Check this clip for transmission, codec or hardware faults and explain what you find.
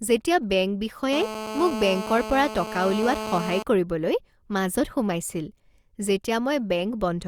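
One hardware fault is present. GSM phone buzz, 1.13 to 3.63 s, after "যেতিয়া বেংক": the audio circuitry rectifies a nearby 2G phone's call bursts into a steady, raspy 217 Hz harmonic buzz about 8 dB below speech.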